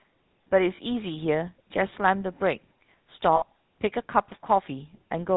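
Throughout, the GSM full-rate codec gives the speech a buzzy, gravelly roughness. A spectrogram shows nothing above 4 kHz, and the damage is plainly audible, consistent with a 13 kbps stream. Lost GSM frames at 0.76–0.79 s and 3.36–3.44 s hold the last sound as a metallic ring. The waveform shows repeated cycles over roughly one and three frames' worth.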